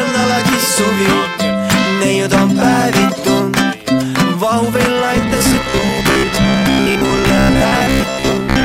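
From 5.17 s to the end at 8.65 s, the sound turns into robotic sound from repeated short buffers, heard as a rigid, metallic buzz at 66.7 Hz that loosely tracks the underlying audio. The likely cause is new audio arriving too seldom, so playback fills the gaps by looping the last fragment, about 15 ms long, matching the buzz period. Roughly half the material is repetition, with the real audio skipped in between.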